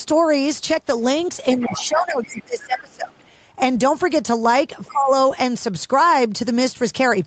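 A short speech clip from a call. The other side's voice leaking through shows up faintly, well under the talker, at 1.56 to 1.99 s, 2.23 to 2.43 s, 2.61 to 2.80 s and 4.84 to 4.93 s, likely loudspeaker echo the canceller didn't fully remove. Speech suppressed in double talk overlaps it: the talker ducks by up to around 20 dB from 1.61 to 3.23 s and by around 15 dB from 4.92 to 5.11 s, likely the canceller turning everything down while both sides overlapped.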